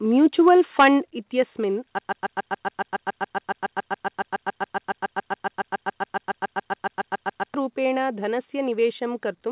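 Input gain on the microphone was likely set too high, so the loudest speech peaks ran past the converter's ceiling and were flattened. At 0.47 to 0.49 s the overshoot is slight, about 1 dB, and only a small share of samples is cut, giving a brief gritty tick. From 0.79 to 0.88 s the microphone overload is heavier, about 5 dB over with roughly a tenth of the samples clipped, and the peak turns harsh and crackly.

Reacting to those distorted peaks, the call software likely pulled the device's input level down in a single move. At 1.02 s this microphone volume step down drops the voice and the background together by about 6 dB. The change is abrupt rather than a smooth fade, so the sound after it is noticeably quieter.

From 1.99 s to 7.54 s a stall in the stream or player likely left it resending the last fragment it held. The result is a broken-record loop: a 0.14 s slice repeats back to back, 40 times, as a stutter. 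The speech that should have filled those five and a half seconds never arrives. Throughout, the call path's narrowband coding, consistent with G.711, leaves nothing above 4 kHz.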